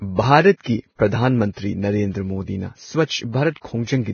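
A short speech recording, heavily coded throughout: nothing survives above 6.6 kHz, and the remaining treble is hissy and grainy with roughened tones. This points to Vorbis compression, likely at a bitrate near 18 kbps. On a spectrogram it appears as a hard horizontal ceiling with speckled, noisy upper bands. Pre-echo also occurs three times, at 0.56 to 0.61 s, 3.04 to 3.09 s and 3.51 to 3.56 s. A short hiss lasting roughly 46 to 56 ms runs ahead of each sharp onset and softens the attack. This happens because quantisation noise scaled for the loud onset spreads back across the quiet start of the block. On a waveform it shows as a low fuzzy smear just before each transient.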